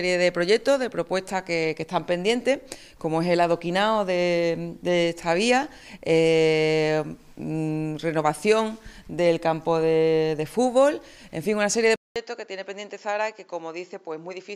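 At 11.96 s the sound cuts out for about 200 ms, then returns duller and about 5 dB quieter, with nothing above 7.6 kHz and a new, faint noise floor, until the end. That points to the input likely switching to a poorer device, not a mere filter change.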